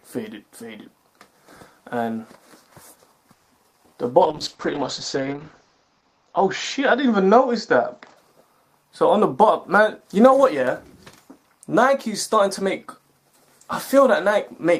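From 3.33 to 3.75 s there is repeated packet loss with a robotic sound. Four holes open in quick succession, the longest about 170 ms. The receiver patches each one by stretching out the last sound, so nearly half of that short span is synthetic fill and the rest has pieces simply gone. It sounds choppy. On a spectrogram the harmonics freeze into flat, smeared bands broken by short blank slots, and the waveform shows repetitive, too-regular cycles.

Right after, from 3.78 to 4.13 s, comes a jitter buffer slow-down. The receiver repeats single pitch periods to rebuild its reserve, adding about 53 ms so the audio plays at roughly 88% speed with the pitch unchanged. The sound drags and stretches. The waveform shows near-identical periods repeated back to back, and spectrogram features are elongated in time without shifting in frequency.

From 4.21 to 8.23 s a call bitrate drop sets in. The coarser coding fits a fall from about 32 kbps to 8 kbps, with the lowest quality lasting about 1.3 s. 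The audio bandwidth shrinks from 20 kHz to 8 kHz, so the sound turns muffled, rough and watery. On a spectrogram the energy above 8 kHz abruptly vanishes, leaving a hard horizontal ceiling, and the remaining detail looks blotchy and quantised until the upper band returns.

Two jitter buffer speed-ups follow, from 9.21 to 10.67 s and from 11.43 to 13.00 s. The receiver trims short stretches of one or a few pitch periods to shed excess delay, removing around 70 ms at about 104% speed, then about a tenth of a second at about 106%. The second sounds slightly hurried, with pitch intact. The waveform shows tiny splices where cycles are cut out, and spectrogram events arrive a little compressed in time.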